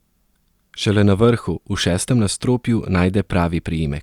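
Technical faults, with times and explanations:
No technical faults detected.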